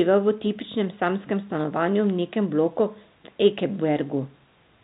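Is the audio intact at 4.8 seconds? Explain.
Yes, the audio is intact at 4.8 seconds, with no fault present at that moment.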